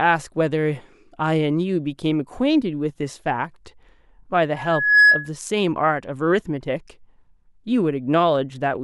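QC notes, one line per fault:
4.56–5.31 s, loudspeaker feedback squeal: a single tone at 1.7 kHz swells over roughly 0.4 s to around 10 dB above the speech. The microphone is picking up its own loudspeaker, and loop gain at that frequency exceeds unity.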